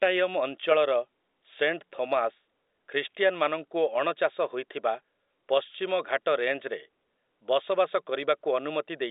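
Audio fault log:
Nothing stood out on listening to this telephone-band speech, which comes across as an ordinary G.711 A-law line.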